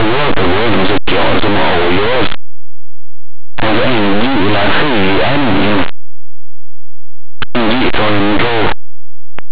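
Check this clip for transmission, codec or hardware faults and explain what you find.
There is one fault, and it runs through the whole clip: the speech is buried under harsh, buzzing distortion, with even quiet passages blasting loud and gritty. This is linear audio read as companded. The samples were written as plain linear 8-bit values but decoded as mu-law codes. Small values just to one side of zero are expanded to the largest outputs, while their neighbours stay small, so the waveform is violently distorted.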